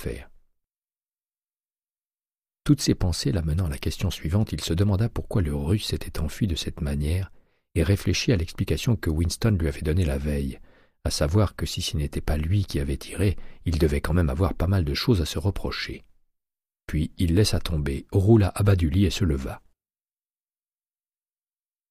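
No technical faults can be heard anywhere in this recording.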